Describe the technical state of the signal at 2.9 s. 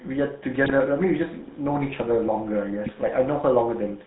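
At 2.9 s the signal is hit by GSM bit errors, spanning 2.86 to 2.98 s. Corrupted bits reach the decoder and scramble its filter, pitch and gain values. The spectrum warps and the level jumps. The speech breaks into squawks and gargling. The 0.12 s span fits roughly six damaged frames.

Underneath runs the GSM full-rate codec, audible through the whole clip. It rebuilds speech from a vocal-tract model driven by sparse pulses, which fits a 13 kbps stream. Nothing passes above 4 kHz. The result is a plainly buzzy, gravelly roughness.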